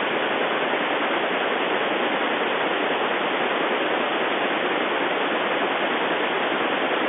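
No technical faults are present in the speech; it is carried over ordinary G.711 telephone coding, with the sound confined to the familiar line band of roughly 300 Hz to 3.5 kHz, consistent with a standard 64 kbps mu-law telephone channel.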